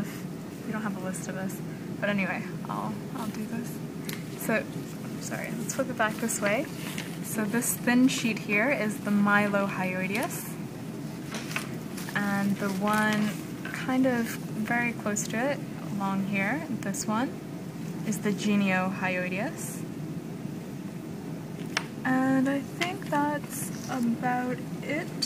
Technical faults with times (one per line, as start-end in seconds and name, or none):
none